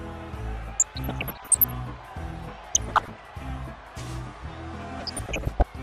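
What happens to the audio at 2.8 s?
DAB burbling breaks out from 2.75 to 3.10 s. Bit errors slip past the error correction and put short blips of noise into single sub-bands. Underneath, the sound stays dull and gurgling, with coarse granular distortion. That is likely from MP2 compression switching off upper bands, which fits a rate around 80 kbps.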